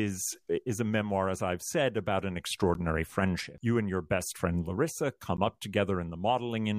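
Blocks of digital silence at 2.74 s and 5.37 s interrupt this speech: each gap lasts about 11.6 ms, fitting an unfilled 512-sample buffer, and its hard edges produce a tick.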